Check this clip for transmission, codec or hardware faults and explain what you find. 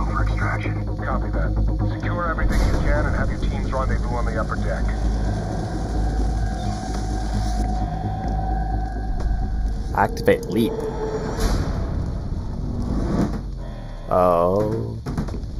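One fault runs through the whole clip: channel delay (comb filtering). The sound has a hollow, phasey colour with fixed notches, the first near 3 kHz. One channel arrived about 0.2 ms late, so summing to mono cancelled shared content at evenly spaced frequencies.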